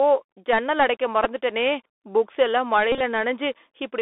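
The Bluetooth CVSD headset codec runs through the whole clip of speech, and its damage is plainly audible. The encoder sends one bit per sample, 64 kbit/s, saying only up or down with an adapting step, and the line passes just 300 Hz to 3.6 kHz. Sharp, loud high sounds outrun the step and distort, sibilants turn scratchy, and a granular hiss sits under the speech.

A Bluetooth headset packet repeated at 1.24 s, just after "ஜன்னல் அடைக்க". Lost packets between headset and phone were filled by decoding the previous packet's bits again, covering about 11 ms, which fits three lost packets. A second, heavier stretch runs from 2.92 to 3.01 s, after "புக்ஸ் எல்லாம்". About 71 ms of audio is replaced, scattered over 82.5 ms, with the longest run around 30 ms. That points to roughly nineteen lost packets. Where the repeats chain, the 3.75 ms cycle produces a buzz near 267 Hz until good packets return.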